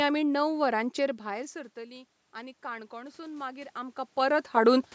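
From 1.0 s to 4.89 s the automatic gain rising is audible: after the talker moves back and the level at the microphone falls by about 18 dB, the gain control slowly adds about 7 dB, so voice and room noise swell together. On a waveform the envelope climbs steadily; a spectrogram brightens evenly across all bands, noise floor included.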